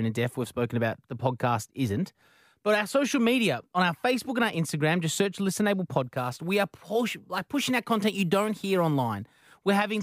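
From 6.04 to 9.56 s the speech goes through a crude rate conversion, with samples simply repeated rather than filtered, which fits a 32 kHz to 44.1 kHz step. The resulting error, roughly 25 dB below the speech, adds a gritty, inharmonic fizz that tracks the louder, brighter sounds.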